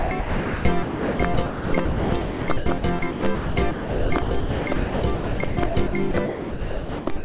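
A music clip, chopped throughout from 0 to 7.24 s, with about 4.7 s of the music replaced by a flat synthetic hiss. The likely cause is sound chopped by the voice detector: the sender's detector repeatedly treated the music as silence and sent comfort noise instead. On a waveform, the music's envelope keeps dropping into stretches of low, even noise. On a spectrogram, the harmonic lines vanish into smooth, featureless bands. Everything sits below 4 kHz, which fits the narrowband G.711 call codec carrying it.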